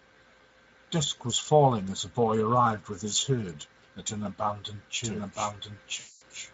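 Speex codec coding runs throughout the speech, with plainly audible damage: a bitrate around 16.8 kbps leaves too few bits for the excitation, so the sound is hoarse and noisy.

A doubled audio track starts abruptly at 5.04 s and lasts to the end. A second copy, about as loud as the original, trails by roughly a second, likely from a slower capture path.

VoIP packet loss concealed by the speech codec runs from 5.99 to 6.23 s. About 220 ms of audio is missing, which fits roughly eleven 20 ms frames, and the decoder fills the gap with a fading extension of the last sound.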